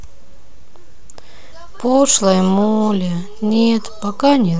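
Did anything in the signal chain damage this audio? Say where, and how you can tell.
Yes. The speech carries a DC offset throughout, with the whole waveform sitting about -25 dBFS away from zero. That points to the analogue front end or converter input, where a constant bias rides under the signal, eating headroom and showing as steady energy at 0 Hz.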